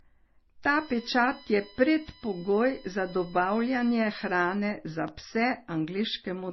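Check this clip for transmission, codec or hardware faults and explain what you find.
Two faults are present: codec damage throughout and a USB whine partway through.

Throughout, nothing survives above 5.9 kHz, with layered artefacts. This is likely transcoding between lossy codecs, an MP3 into AAC-LC, each stacking artefacts.

From 0.73 to 4.55 s, a USB whine sits at 1 kHz harmonics, strongest at 7 kHz. Bus frame current leaks through power or ground, roughly 20 dB under the speech.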